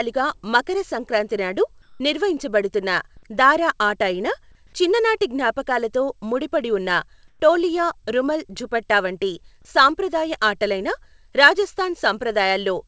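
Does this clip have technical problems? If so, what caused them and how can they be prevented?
Yes. At 1.82–2.00 s, after "మకర సంక్రాంతి నాడు", and at 7.28–7.40 s, after "చిన్ననాటి జ్ఞాపకాలతో ముడిపడి ఉన్న", the real background gives way to flat, featureless hiss, about 2 dB quieter the second time. That's comfort noise in place of the background, likely from the sender's discontinuous transmission. Turning off DTX on the sending side prevents it.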